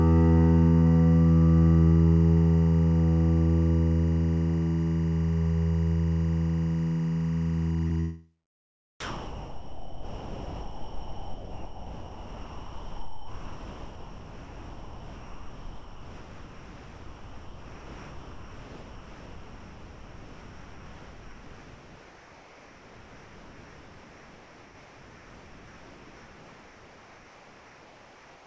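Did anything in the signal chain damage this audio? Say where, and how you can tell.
Yes. Timecode bleed in the analogue wiring: a chirping warble near 1 and 2 kHz, roughly 25 dB under the music, cycling at 24 frames per second throughout.

A short concealed packet loss on the network at 7.88 to 7.92 s: about 20 ms never arrived, and the decoder patched it by extending the previous sound, leaving a brief smear.

From 9.0 s to the end the music gives way to steady comfort noise, likely sound dropped by the voice detector in call processing, which mistook the music for background and stopped sending.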